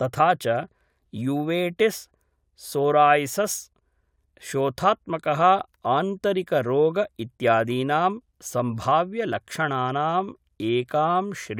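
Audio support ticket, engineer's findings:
Listened through the speech recording and nothing stood out as a fault worth noting against any component in the chain.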